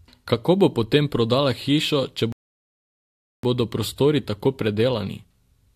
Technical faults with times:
2.32-3.43 rebuffering stall

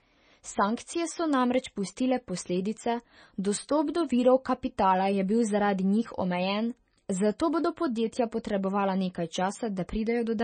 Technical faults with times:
0.00-10.44 MP3 compression

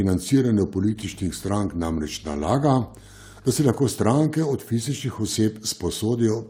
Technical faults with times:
0.90-3.69 mains hum

